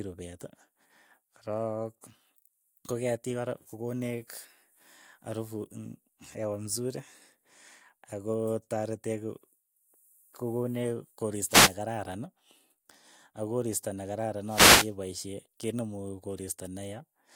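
A speech recording with two wireless microphone noise hits, the first from about 11.48 to 11.73 s and the second, longer one from about 14.44 to 14.95 s. Each is a brief swish of static breaking over the voice. What's happening is the FM radio link fading as reflected signals cancel the direct one, so the receiver's own noise surges up. The second hit lasts about half a second.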